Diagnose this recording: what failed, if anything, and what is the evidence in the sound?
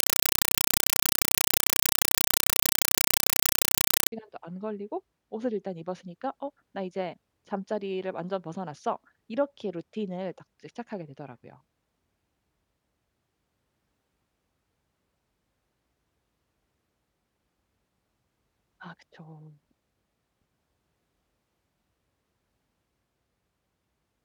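The first 4.12 s is a compressed stream played as audio, a fault at the playback end of the digital link. You hear loud chattering static, 5.33 ms bursts repeating 31.25 times a second, which fits undecoded Dolby Digital frames being sent out as raw samples.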